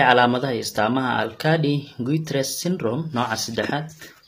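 Throughout the speech, the treble sounds gritty and metallic, most plainly on s sounds, with nothing above 15.4 kHz; this is likely HE-AAC compression at a low bitrate near 24 kbps, rebuilding highs by band replication. A spectrogram shows copied, smeared upper bands and a hard ceiling.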